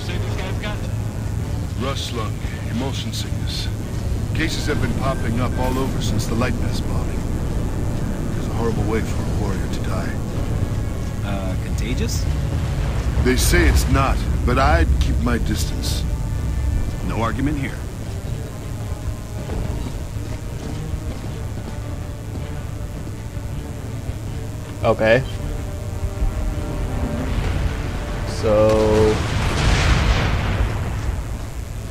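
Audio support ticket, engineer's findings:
Mains buzz throughout, about 25 dB below signal. Dimmer or rectifier spikes at 120 Hz; spectrogram shows 60 Hz harmonic comb reaching several kHz, waveform regular spikes.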